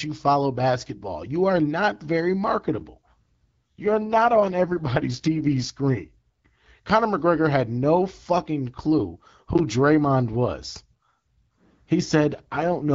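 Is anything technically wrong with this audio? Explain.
Yes. There are two AMR rate drops, from 3.05 to 5.72 s and from 12.33 s to the end. During each one the wideband coding falls to roughly 6.6 kbit/s from about 12.65 kbit/s, and the speech turns rough and raspy. On a spectrogram the band stays intact but the harmonics blur, and the waveform shows no gap.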